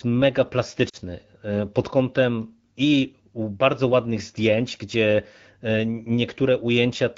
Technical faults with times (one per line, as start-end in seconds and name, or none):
0.89-0.96 lost AMR speech frames